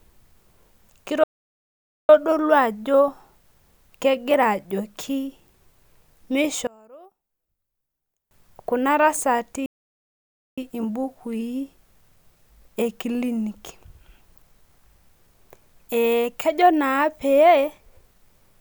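At 1.23 s the player most likely ran out of buffered data or had its thread blocked, a playback stall. Output drops to silence in mid-phrase for about 0.85 s, and the speech resumes at 2.09 s.

From 6.67 s to 8.31 s one channel is inverted, probably a polarity flip on one side of the stereo pair. Summed to mono, the matching content in the two channels cancels, so the centred speech falls by about 29 dB. What survives is a faint residue of the difference between channels.

A second stall, with the same probable starved buffer or blocked thread, begins at 9.66 s. Silence cuts in abruptly for about 0.91 s before the speech continues at 10.58 s.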